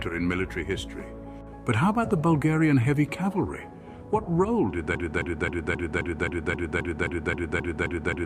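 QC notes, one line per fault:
4.95 s to end: broken-record loop. A 0.26 s fragment repeats exactly, back to back, twelve times until the clip stops. No new audio arrives after 4.95 s. The likely cause is a stalled player or stream resending its last buffered piece.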